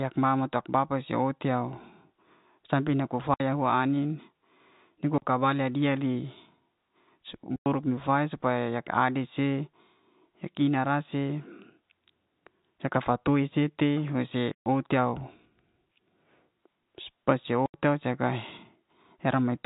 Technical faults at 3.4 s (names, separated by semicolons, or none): packet loss filled with silence